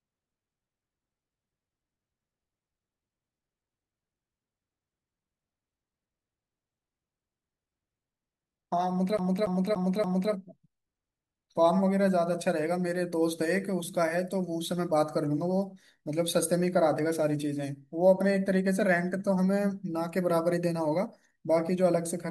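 From 9.17 s to 10.32 s the speech catches on a fragment about 0.29 s long and repeats it four times in a fast, even stutter, with a brief mute at each jump back. This is a CD stuck on one turn: a scratch knocks the laser back one track at the same point of every rotation, so the player keeps rereading that one slice of audio until it breaks free.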